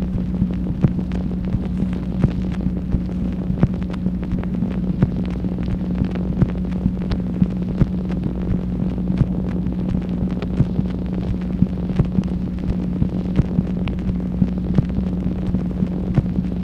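Nothing technically wrong turns up anywhere in this audio, so there's no fault here to point to or pin a time on.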